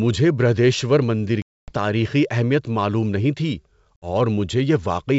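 At 1.42 s and 3.96 s, packet loss on an ADPCM call cuts abrupt silent holes of 260 and 60 ms. The decoder's predictor loses sync. Speech returns with brief distortion.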